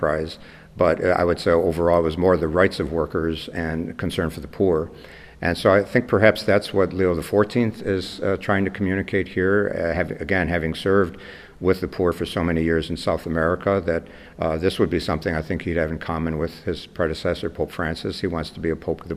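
No technical faults can be heard anywhere in this audio.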